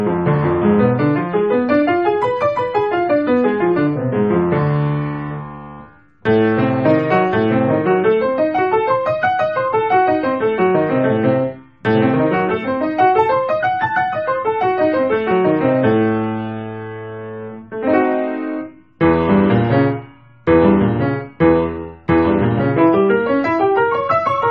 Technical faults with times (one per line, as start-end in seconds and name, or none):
none